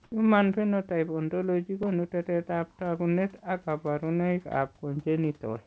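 From 0.04 to 0.12 s, about 80 ms of room background gives way to comfort noise: a steady, featureless hiss about 39 dB below the loud passages, shifted in level by about 5 dB. The likely cause is discontinuous transmission, with the receiver synthesising shaped noise while the sender pauses.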